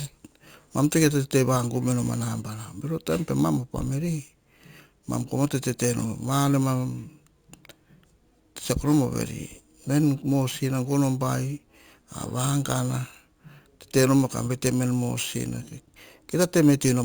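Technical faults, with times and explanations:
Throughout, imaging from sample-and-hold upsampling: samples were repeated without smoothing, fitting a 16 kHz source raised to 44.1 kHz. A mirrored spectrum fills 8 to 16 kHz about 18 dB down, heard as metallic fizz. A spectrogram shows an inverted reflection above 8 kHz, with a stair-stepped waveform.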